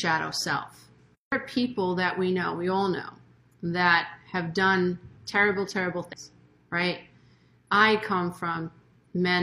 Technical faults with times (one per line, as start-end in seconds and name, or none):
6.09-6.13 damaged data in a compressed stream